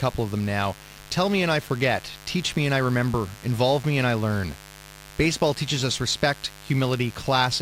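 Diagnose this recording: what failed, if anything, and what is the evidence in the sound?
The analogue wiring let mains interference into the signal path, most likely through a dimmer, rectifier or broken shield injecting sharp switching spikes twice per cycle of a 50 Hz supply. The result is mains buzz running through the whole speech clip, a steady raspy drone sitting roughly 20 dB below the speech. Because the spikes are so narrow, their harmonics climb from 50 Hz well up into the kilohertz range, giving a gritty edge rather than a smooth hum.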